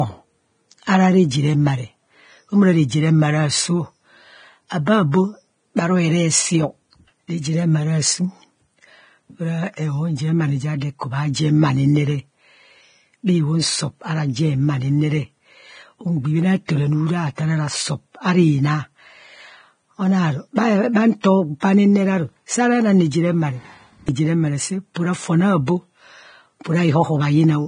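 Hissy, grainy speech with nothing above 9.7 kHz runs throughout, likely from heavy Vorbis compression at about 23 kbps, quantising the treble into noise. At 24.94 s, a brief hiss precedes an attack: pre-echo, where quantisation noise spread across a transform block leaks about 19 ms ahead.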